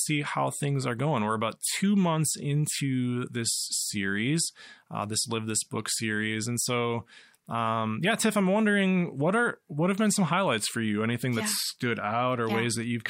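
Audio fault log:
No technical faults can be heard anywhere in the signal.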